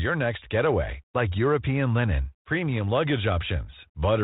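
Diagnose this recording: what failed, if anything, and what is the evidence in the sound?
Nothing has failed here: the speech has simply come through a G.726 ADPCM link at 32 kbit/s, the rate DECT cordless phones use, and what that leaves audible is the telephone band stopping at 4 kHz plus a light coding texture.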